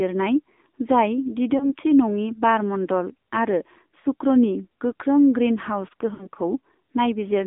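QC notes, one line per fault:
Throughout: AMR narrowband mobile codec. Sound is confined to roughly 200 Hz to 3.6 kHz, with the buzzy, synthetic texture of a low-rate vocal-tract model, fitting about 7.4 kbps.
1.58–1.72 s, 4.00–4.06 s (just after "मण्डल आरो"), 6.14–6.27 s: lost AMR speech frames. The decoder repeats the last good settings at falling gain, causing brief dips and warbles. The gaps fit one, two and three 20 ms frames respectively.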